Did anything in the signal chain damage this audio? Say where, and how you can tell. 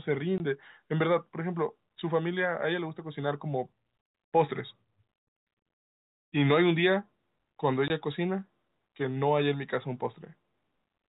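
Yes, at the network stage: packet loss filled with silence. The speech drops to dead silence from 0.38 to 0.40 s and again from 7.88 to 7.90 s, each hole exactly 20 ms with hard edges. That length fits one lost 20 ms packet on a G.711 telephone path, which accounts for the 4 kHz band limit. A driver or buffer underrun would leave gaps sized to the audio buffer rather than to whole packets, and packet-loss concealment would bridge the gap with synthesised sound instead of silence.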